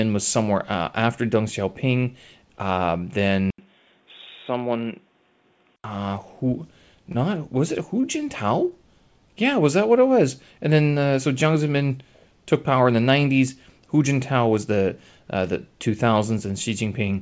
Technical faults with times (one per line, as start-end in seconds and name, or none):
3.50-5.84 input switched to a poorer device
7.12-7.16 short concealed packet loss
8.01-8.05 short stall from a late packet
8.69-8.73 short stall from a late packet